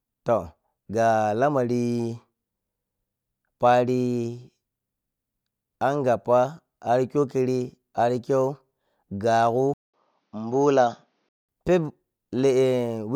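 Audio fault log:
9.74–11.49 s, input switched to a poorer device. A 200 ms gap, then dull sound with nothing above 6.8 kHz. Likely a narrower-band microphone.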